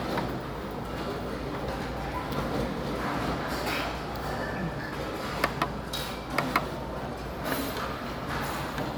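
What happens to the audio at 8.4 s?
Nothing goes wrong at 8.4 s; the sound carries on intact through that moment with no dropout, click or other fault.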